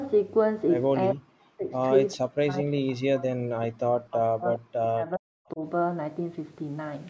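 Speech, and it gets ducked hard twice: 1.14 to 1.73 s, then 2.16 to 5.59 s, dropping by about 40 dB at worst. That's speech suppressed in double talk, likely the echo canceller mistaking the talker for far-end echo and turning everything down.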